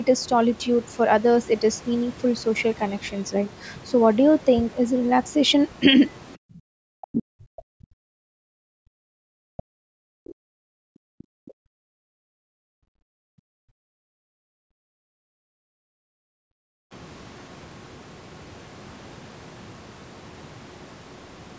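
From 6.68 to 8.15 s and again from 8.57 to 10.69 s, the talker's speech sinks by as much as about 40 dB. This is speech suppressed in double talk, likely from an echo canceller that cannot tell the talker from loudspeaker echo while both sides speak. Unlike gating, it removes the voice itself, not just the room.

Inside the second dip, from 9.58 to 9.63 s, and again from 11.19 to 11.24 s, a faint foreign voice surfaces for an instant, roughly 25 to 30 dB below the talker. That is the other side's voice leaking through: likely echo the canceller failed to subtract. It adds a second voice rather than taking anything away.

From 10.97 to 16.92 s the room tone is pushed down by up to about 40 dB for around five seconds in total. This is background gated by the echo canceller, clamping the microphone while the loudspeaker plays. Here the ambience vanishes and returns.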